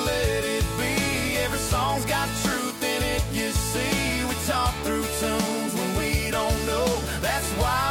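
Nothing is technically wrong with the clip.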